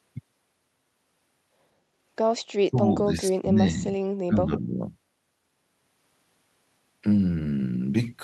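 From 2.64 to 3.97 s the speech dips deeply, and again more lightly from 4.26 to 4.78 s: likely speech suppressed in double talk, with the echo canceller ducking the talker.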